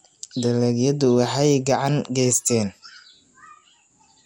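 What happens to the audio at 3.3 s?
At 3.3 s the speech carries the same MP2 compression damage heard across the whole clip: nothing above 16.7 kHz, a dull tone and a gurgling, granular texture. This is likely Layer II coding at a rate near 80 kbps, starving upper sub-bands of bits.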